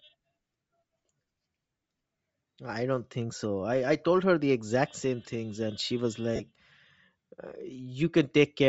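Throughout the clip the speech carries a breathy, grainy edge: the upper spectrum sounds hollowed out and refilled with a hiss-like texture rather than real detail, and the damage is plainly audible. This points to Bluetooth LC3 compression as the likely cause. The LE Audio transform codec, running at a low bitrate that fits something near 32 kbps with short frames, discards much of the high-frequency content and substitutes shaped noise for it.

From 6.36 to 6.41 s, right after "things and she was", the sound briefly turns into a noisy, smeared blur lasting about 37.5 ms before the ordinary compressed audio resumes. This is lost LE Audio frames. The decoder had nothing to decode for that stretch, so it repeated the last spectrum it received with randomised signs. The concealment holds the level for the first few frames before fading it, and scrambles the detail, which turns a few frames' worth of speech into noise.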